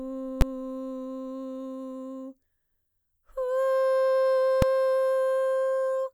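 At 0.41 s and again at 4.62 s the music is hit by invalid numbers at full scale. A calculation returned infinite or invalid values, which clipped to maximum level. Each short block, about 11 ms and 3 ms, fitting 512- and 128-sample blocks, sounds as a single loud bang.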